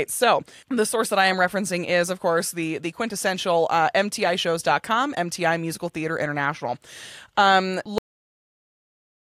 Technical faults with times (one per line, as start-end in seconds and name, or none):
7.98-9.29 cut-off end